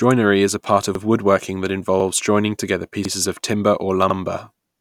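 At 0.95, 2.00, 3.05 and 4.10 s, overlapping chunks replay 50 ms of speech at each 1 s join, causing regular stutters, visible as duplicated waveform slices.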